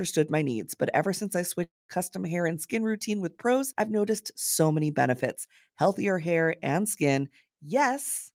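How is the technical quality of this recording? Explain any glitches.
There is one glitch, a break in the speech. From 1.63 to 1.91 s, just after "but ever since I", the sound drops out. The last sound is stretched into a buzzy tail that fades, followed by about 0.2 s of near silence. The speech resumes at "hair and skin routine", with about a quarter second missing. This is likely a long network dropout. Packets stopped arriving, the receiver filled the gap by extending the last sound, then gave up and went quiet.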